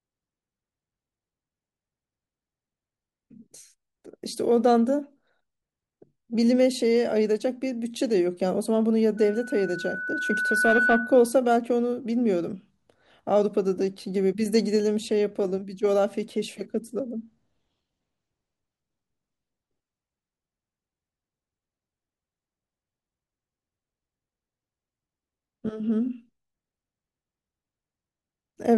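A speech recording with loudspeaker feedback squeal from 9.17 s to 11.38 s. A single tone at 1.5 kHz swells over roughly a second and a half and peaks about 5 dB above the speech. The microphone is picking up the loudspeaker it feeds, and at 1.5 kHz the loop gain exceeds one, so that frequency grows on itself. It stops at 11.38 s, consistent with the loop being broken.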